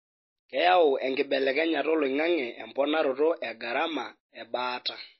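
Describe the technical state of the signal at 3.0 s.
At 3.0 s the speech carries MP3 compression damage, present from start to end. Nothing is heard above 5.8 kHz. Weak frequency lines drop in and out between frames, giving a watery, swirly texture. This likely comes from MP3 encoding at a low bitrate near 24 kbps.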